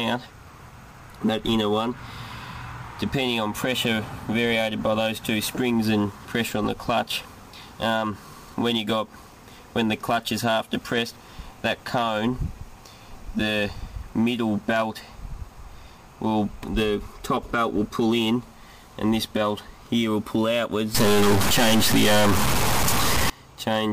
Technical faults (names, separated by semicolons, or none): stuck bit